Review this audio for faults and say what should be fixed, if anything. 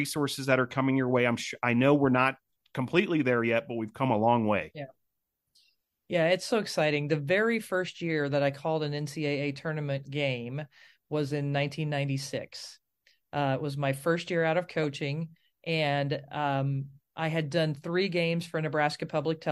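At 14.83 s, just after "first year out of", a corrupt frame was decoded: flipped bits in roughly two compressed frames made the decoder place energy at wrong frequencies, heard as a brief blip peaking near -35 dBFS. A spectrogram shows a thin vertical smear; the waveform shows a tiny spike. Preventing it needs checksums or error detection on the stream, so damaged frames are concealed rather than played.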